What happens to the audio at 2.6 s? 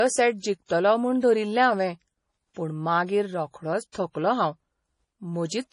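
From 2.54 to 2.56 s, a short hiss smears in just ahead of a sharp attack: pre-echo. The codec spread quantisation noise across its whole block, so the noise lands before the onset rather than trailing it like a reverb tail. Underneath, the audio sounds watery with nothing above 10.6 kHz, likely from heavy MP3 compression at a rate that fits about 32 kbps.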